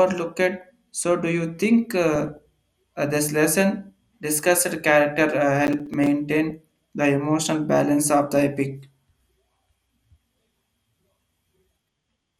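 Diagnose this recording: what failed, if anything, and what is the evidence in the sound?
MP2 compression affects the whole 12-second speech clip. The sound is dull, with the top end missing and a granular, gurgling grain on every phrase. That points to the codec stage, likely MPEG Layer II at a low rate, which fits something around 80 kbps. At that rate the encoder cannot fund all 32 sub-bands. The upper bands drop out and flicker in and out, and the remaining bands are quantised coarsely enough for the damage to be plainly audible.

DAB burbling is heard from 2.15 to 2.37 s, between "do you think" and "uh this lesson discussed", and again as a brief blip at 6.50 s. Both are short disturbances laid over the speech. This is a transmission fault on the broadcast link. A bit error rate of a small fraction of a percent gets past the error correction into the Layer II frames. Corrupted samples then put short blips of noise into single sub-bands, and corrupted scale factors make sub-bands jump in level for up to a frame.

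Processor overload crackle runs from 5.67 to 6.07 s as a gritty, tearing crackle riding on the speech. This is a driver or buffer fault on the playback or capture machine. The processor repeatedly failed to finish audio buffers of a few milliseconds each before their deadlines, and several missed in a row. Each miss left a hard-edged gap of silence. Packed this closely, the gaps merge into a burst of crackle that stops once the load eases.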